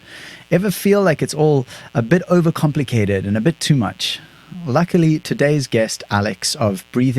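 A 60 Hz mains buzz runs throughout: switching spikes twice per cycle leak into the chain, adding a steady, raspy harmonic buzz roughly 35 dB beneath the speech.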